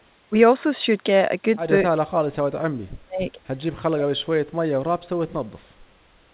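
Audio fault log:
1.94–3.38 s and 3.73–5.57 s, speech suppressed in double talk: the speech sinks and breaks up in pieces, by up to about 35 dB in the first stretch and about 40 dB in the second, affecting roughly a second and then a second and a half. The likely cause is an echo canceller that could not tell the near talker from loudspeaker echo and suppressed both. Unlike packet loss, there are no clicks or robotic fill, only choppy gain cuts. The narrow telephone band, with nothing above 4 kHz from the G.711 path, is present throughout and is not part of this fault.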